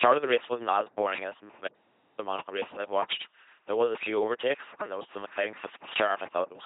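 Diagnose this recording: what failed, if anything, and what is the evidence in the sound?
At the codec stage, the whole speech clip carries heavy LPC-10 vocoder damage: a buzzing, robotic 2.4 kbit/s pulse-or-noise excitation, with nothing above 3.8 kHz.

After "wasn't as boring as", an audio dropout to silence runs from 1.69 to 2.18 s, about 0.49 s of silence, likely from a lost input link.

At the analogue wiring stage, a phantom power thump at 4.26 to 4.48 s, between "was a few" and "and there was some", decays in about 50 ms.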